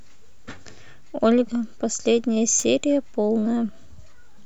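Loose connector crackle at 2.59 to 2.64 s: a worn contact briefly makes and breaks, chopping the speech into a short burst of scratchy crackle.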